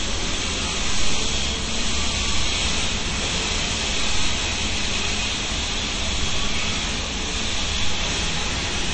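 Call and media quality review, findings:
MP3 compression, throughout. Watery, swirly texture with metallic chirps and smeared attacks, clearly audible. Nothing above 8.3 kHz. Likely a low-rate MP3 encoder, near 30 kbps by the sound, cutting treble and toggling weak frequency lines between frames.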